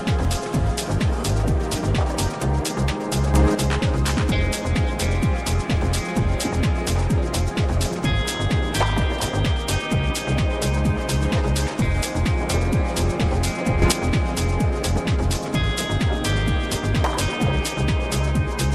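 A sudden gain jump hits at 3.34 to 3.55 s, about 6 dB, and again at 13.82 to 13.92 s, about 7 dB. The sound and its background noise step up together, likely from a digital gain change applied between adjacent samples without any ramp.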